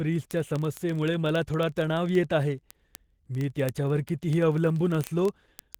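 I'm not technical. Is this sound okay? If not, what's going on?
No. Throughout the speech there's Opus voice compression, heavy enough to hear plainly: the voice sounds muffled, hoarse and faintly robotic. That gritty, processed texture is what separates it from a simple dull microphone, which would soften the sound without roughening it.

From 0.13 s to 5.78 s there are also word clock ticks: sharp clicks of uneven loudness about thirty times a second. Two digital devices are running on slightly different clocks, and a sample slips each time. Random crackle wouldn't keep such a steady rhythm.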